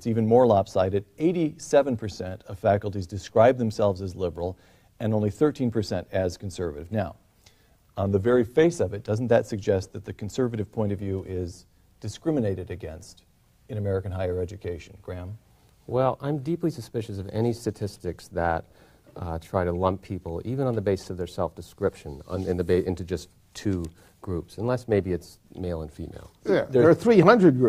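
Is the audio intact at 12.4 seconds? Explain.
Yes, the audio is intact at 12.4 seconds, with no dropout, click, distortion or other fault at that moment.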